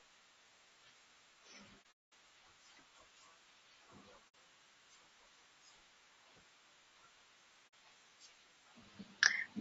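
Speech that sounds rough and grainy throughout, most likely from low-delay AAC compression (AAC-ELD) at a low rate fitting about 32 kbps. On a spectrogram, noise fills the gaps between harmonics and the top band looks smeared. AAC frame loss with muting leaves soft-edged silences: a scattered cluster from 1.82 to 2.13 s (the longest hole about a fifth of a second), then short gaps at 4.28 to 4.35 s and 7.67 to 7.74 s. These appear as tapered dips to flat silence in the waveform and blank vertical bands on the spectrogram.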